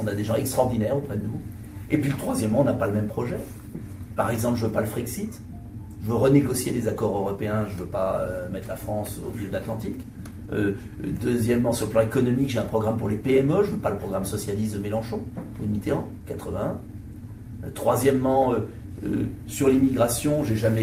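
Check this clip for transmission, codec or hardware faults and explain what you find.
Two related timing faults run through the whole clip, both from the two ends disagreeing about the sample rate.

Clock drift between sender and receiver is present throughout: the sender's clock runs about 5 percent fast, so the receiver's jitter buffer keeps overfilling and small hiccups recur at uneven intervals.

Repeated timing corrections run from 0.19 s to 20.77 s at 105 percent speed. The receiver keeps discarding short slices to catch up, so the tempo sounds slightly unsteady, with brief skips.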